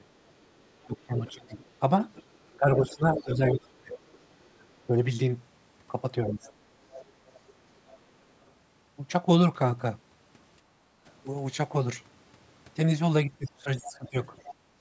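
From 0.0 to 6.4 s the echo canceller likely could not tell the near talker from loudspeaker echo while both sides spoke, so it turned everything down. This is speech suppressed in double talk: the voice dips by roughly 20 dB, thins or breaks up, for about two seconds in total across that span.

Overlapping this, from 0.44 to 4.65 s, residual loudspeaker echo was likely not fully cancelled, so the other side's voice leaks through at roughly 15 dB below the talker. It returns from 6.27 to 8.51 s at roughly 20 dB below.

At 10.72 to 10.92 s the canceller clamped the microphone while the loudspeaker played, so the background is gated by the echo canceller. The room sound drops by about 8 dB for around 150 ms, then comes back.

From 13.26 to 14.17 s double talk likely triggered the same suppression again. The voice sinks by roughly 20 dB for about 0.7 s in total.

From 13.85 to 14.53 s the other side's voice leaks through once more at roughly 20 dB down, likely from uncancelled loudspeaker echo. 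It sits under the talker.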